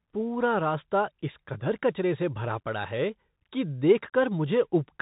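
Bluetooth CVSD headset codec, throughout the speech: the sound is carried as a single up-or-down bit per sample, consistent with a 64 kbps stream, with an adapting step size. Nothing above 3.8 kHz survives, sibilants turn scratchy, and a grainy hiss sits beneath everything.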